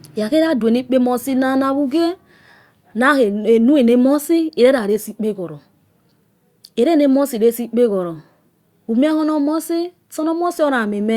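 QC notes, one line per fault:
No fault found in this speech clip.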